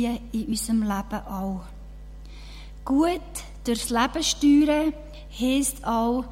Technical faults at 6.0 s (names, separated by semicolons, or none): none